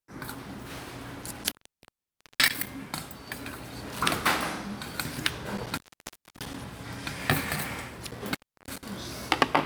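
Intermittent contact at 1.22 to 2.69 s, 5.57 to 6.61 s and 8.10 to 8.91 s: a loose connection briefly opens, so the sound drops out for 0.88 s, 0.63 s and 0.33 s, with crackle at each break and faint hiss during the gap.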